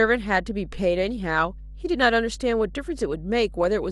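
A ground loop or nearby transformer is leaking the power line into the signal path, producing mains hum at 50 Hz for the whole of this speech clip. It sits as a steady low drone under the speech, around 15 dB below it, so it is plainly audible.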